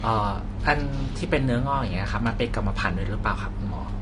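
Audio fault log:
Throughout: low-bitrate audio saved at a high bitrate. The speech has nothing above 10 kHz, likely because an earlier low-bitrate encode's cut-off and artefacts survived re-saving as high-bitrate MP3.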